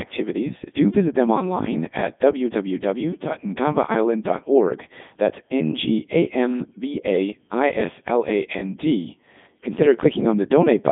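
Speech runs through a Codec 2 vocoder from start to end, which fits its 3.2 kbit/s mode: only pitch, voicing, energy and spectral envelope survive, and sine-wave resynthesis replaces the waveform. The voice comes out heavily robotic and buzzy, confined to 200 Hz to 3.6 kHz, with nothing above 3.8 kHz.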